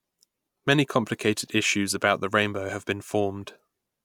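Nothing technically wrong can be heard anywhere in this short speech recording.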